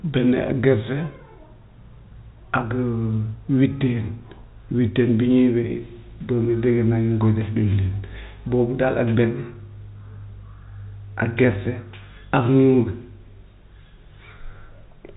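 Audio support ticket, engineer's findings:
No faults found on this speech clip. The G.711 telephone coding path is audible as a band limit, with nothing above about 3.8 kHz, and any codec damage is faint at most.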